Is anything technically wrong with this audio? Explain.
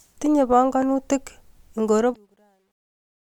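Yes, there are two faults.

Truncation distortion on a fade, from 1.97 s to the end at 3.23 s: the fade-out that begins around 2 s is computed at too few bits and without dither, consistent with a stage keeping only 11 bits. As the level sinks toward the smallest step, the waveform collapses into coarse square steps. The tail grows gritty, worst in the last moments before 3.23 s, rather than dying away cleanly.

Damaged data in a compressed stream, from 2.10 s to 2.16 s: a short stretch of the encoded stream is corrupt, so the decoder misreads the affected frames, loses sync and hunts for the next valid frame header. The result is a brief disturbance of about 56 ms sitting inside the fading speech.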